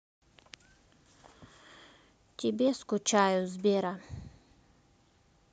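No technical faults can be heard anywhere in this recording of speech. Nothing in the audio calls for a timestamp or a closer look.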